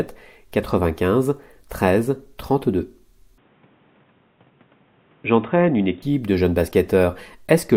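At 3.38 s the sound abruptly goes dull and boxy, with nothing above 3.8 kHz, and a faint new background noise appears, roughly 35 dB below the signal. The switch is seamless, with no gap, and the overall level barely moves. That combination likely means the input switched to a poorer device, perhaps another mic or a headset's call profile, with a narrower band and its own noise floor. At 6.02 s the full bandwidth snaps back.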